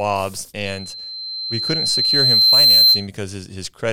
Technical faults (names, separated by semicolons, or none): loudspeaker feedback squeal